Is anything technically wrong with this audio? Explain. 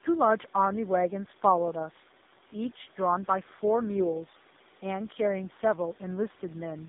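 Yes. Throughout, there's tandem speech coding: the sound points to two low-rate speech codecs in a row, likely GSM then AMR-NB, each recoding the last one's damage, so it's rough, warbly and muffled, with nothing above 3.8 kHz.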